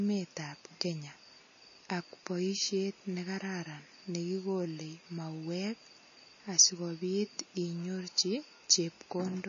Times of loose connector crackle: none

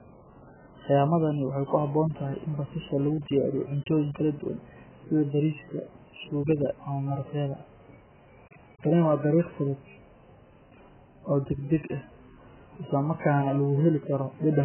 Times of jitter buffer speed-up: none

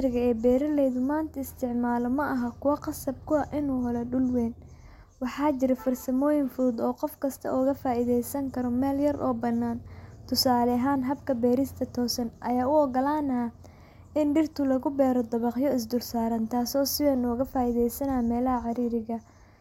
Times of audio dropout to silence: none

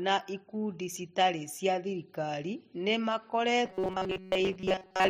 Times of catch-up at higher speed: none

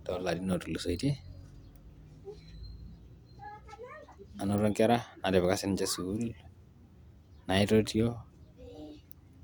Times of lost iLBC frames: none

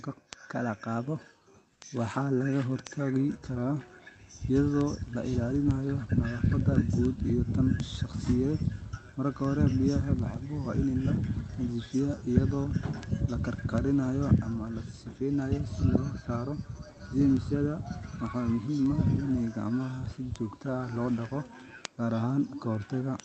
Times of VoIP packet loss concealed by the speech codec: none

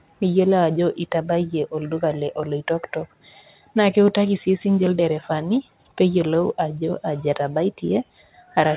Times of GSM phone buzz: none

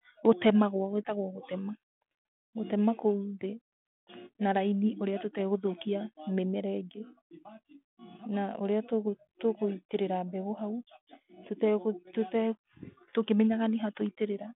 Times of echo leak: none

